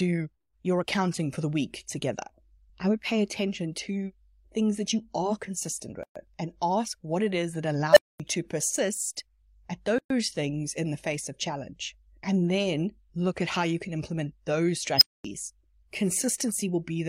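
At 7.92 s an unstable filter takes hold in the speech. A recursive filter whose coefficients have gone wrong feeds its own output back with growing gain, so a tone at roughly 700 Hz swells over about 41 ms into a loud clipped beep until 8.20 s. The values then overflow and the output drops out for about 232 ms before the filter resets. At 14.96 s the same fault returns as a higher squeal, roughly 5 kHz, building over about 50 ms and running to 15.25 s, again followed by a 232 ms silence. What sets these apart from a plain dropout is the swelling tone before the silence.

From 9.98 to 10.10 s there is a gap at a join of encoded pieces, a 119 ms gap with smeared edges. Separately encoded segments were joined without trimming the encoder's start-up delay and end padding. No tone precedes this silence, and the speech picks up exactly where it stopped rather than jumping ahead.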